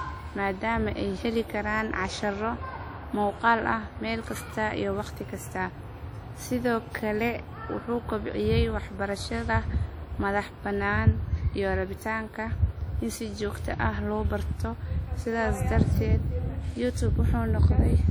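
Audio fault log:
Throughout: WMA compression. The speech rings and sounds washy, with a hiss that rises and falls with the signal. Quantisation noise smears across long transform blocks, and faint detail drops out. This plain damage likely comes from WMA encoding near 48 kbps.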